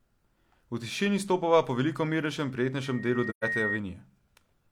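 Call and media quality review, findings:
Loudspeaker feedback squeal, 2.83 to 3.81 s. A single 1.9 kHz tone swells over roughly 0.7 s until it sits at about the same level as the speech. Probable component: the mic-to-speaker path. The loop gain exceeds unity at that frequency, so the tone builds on itself.

AAC frame loss with muting, 3.29 to 3.44 s. A 128 ms soft-edged hole opens inside the squeal. That length fits about three lost frames. Probable component: the decoder or transport. The decoder zeroed the missing spectra, and the window overlap faded the sound out and back in.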